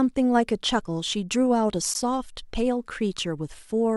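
At 1.94 s the speech drops out for about 15 ms, a Bluetooth dropout likely from a single lost packet, seen as a flat waveform gap and a clean vertical spectrogram stripe.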